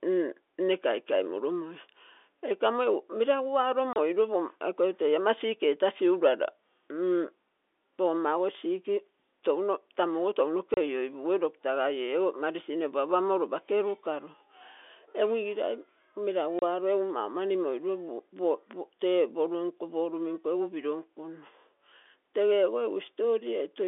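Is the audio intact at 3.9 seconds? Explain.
No, there's a dropout from 3.93 to 3.96 s: packet loss filled with silence. About 30 ms of the telephone-band speech just vanishes, which fits one lost packet, and the receiver played dead silence in its place, leaving a gap with hard edges.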